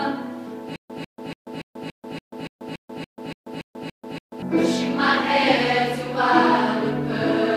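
Stutter with silent gaps runs from 0.76 s to 4.42 s. A burst of about 147 ms repeats 13 times, each followed by about 139 ms of dead digital silence, so the same fragment returns every 285 ms at a steady, mechanical pace. The likely cause is a stalled player or stream replaying its last buffered fragment at each retry and then running empty. Whatever audio belonged in that span never plays.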